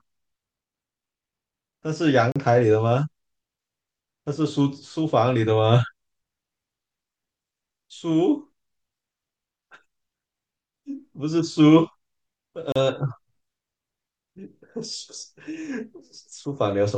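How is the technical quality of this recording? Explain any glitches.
Two short dropouts break the speech, both gaps at a join of encoded pieces. At 2.32 s and again at 12.72 s the sound breaks off for gaps of about 36 ms and 35 ms, then resumes exactly where it left off. Each marks a seam where separately encoded segments were butted together untrimmed, leaving the encoder's start-up delay and last-frame padding as silence. On a waveform each shows as a flat gap with smeared edges; a spectrogram shows a thin vertical blank band.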